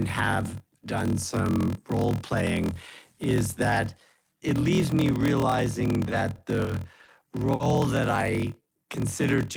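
A speech recording that carries a block size mismatch (padded) from start to finish: each 1024-sample block is written into a larger read block whose remainder is filled with zeros, so a short silent gap lands in every block. The result is a steady 41.7 Hz buzz and speech running at 0.889 times normal speed, which fits 1024 samples padded out to roughly 1152 at 48 kHz. Unlike a resampling error, the pitch stays about where it should, and unlike jitter-buffer trouble, the buzz is constant rather than bunched around particular moments. From 6.09 to 7.10 s, right after "it leaves me realizing", the audio hits repeated stalls (stutter). The jitter buffer runs dry four times, and each time the last sound is drawn out, the longest hold lasting 30 ms, about 100 ms in total, roughly 11% of that stretch. Nothing is dropped, so it drags and catches rather than skipping ahead, which sets it apart from packet loss. 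At 7.53 to 7.62 s there is a single short stall from a late packet. A 60 ms delay jump leaves the buffer empty, and the preceding sound is held for 60 ms before speech resumes from the same place. It is an isolated hold with a slight buzz or dip, not a cluster of catches like the stutter just before it.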